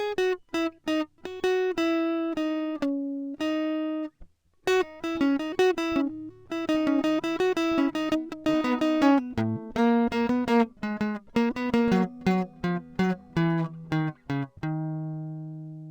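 Music clip with imaging from linear upsampling throughout: dulled top end and faint mirrored images from 11 kHz to 22 kHz, roughly 40 dB down, consistent with a 22 kHz source linearly interpolated to 44.1 kHz.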